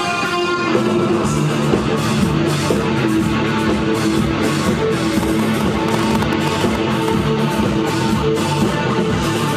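From 5.23 s to 7.09 s a train of clicks sits over the audio: around fifteen similar pulses at an uneven pace, averaging 7.56 per second, peaking roughly 15 dB above the signal. It is likely interference from nearby equipment or a faulty connection or power supply.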